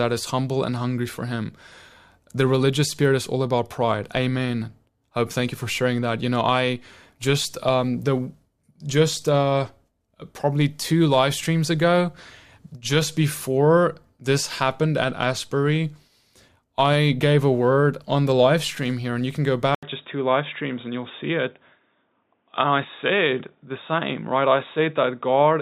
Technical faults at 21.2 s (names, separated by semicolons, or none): input switched to a poorer device